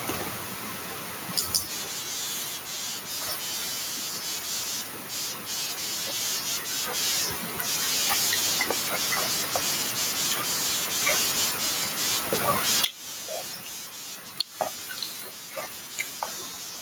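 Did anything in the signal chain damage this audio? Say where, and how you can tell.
Yes. The input gain was most likely set far too high, with a fast limiter in the processing stage clamping each loud syllable. Throughout the speech the gain swings by roughly 15 dB, squashing loud and quiet parts together. The room noise sits about 42 dB down.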